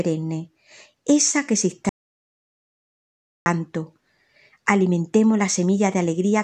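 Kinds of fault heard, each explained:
Audio dropout to silence: The speech cuts off at 1.89 s and returns at 3.46 s. The gap lasts about 1.57 s. It is silent, with no room tone. The input was likely lost while recording continued. Anything spoken then is missing.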